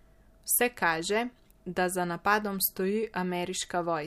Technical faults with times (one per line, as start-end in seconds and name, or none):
none